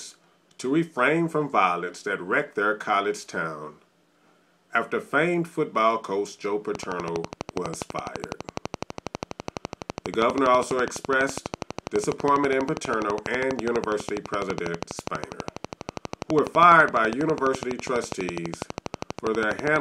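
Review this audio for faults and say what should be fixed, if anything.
From 6.75 s to the end at 19.77 s there's a train of clicks, about 12 a second and evenly spaced. That's around 150 near-identical pops, peaking something like 15 dB above the sound and audible in the gaps too. The likely cause is interference from nearby equipment or a faulty connection or power supply injecting a pulse. To prevent it, keep the gear away from noisy equipment and check the interface's cabling and connections before recording.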